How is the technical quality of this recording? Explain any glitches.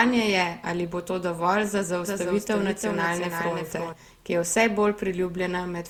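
The recording has two technical faults.

Throughout, there is generation loss: swirly, hollow, smeared speech with softened attacks, likely from repeated lossy re-encoding, consistent with several passes through Opus at about 64 kbit/s.

From 2.07 to 3.93 s, just after "bo to dovolj za" and ending before "ki je vse", a doubled audio track appears. A dry copy about 5 dB quieter trails by roughly 300 ms, likely from a second, slower capture path, and starts and stops abruptly.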